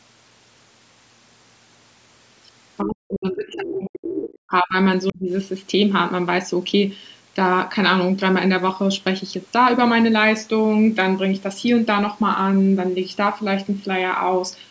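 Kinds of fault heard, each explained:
Speech suppressed in double talk: The talker's level falls away sharply from 2.82 to 4.75 s, around 40 dB down at its deepest, with a shorter dip of about 30 dB at 5.12 to 5.3 s. This is likely the echo canceller turning down both voices while both sides spoke.
Other side's voice leaking through: Brief scraps of a second voice come through at 4.04 to 4.08 s, roughly 10 dB under the talker, and at 5.07 to 5.13 s, much fainter at about 25 dB down. This is likely loudspeaker echo that the canceller did not fully remove.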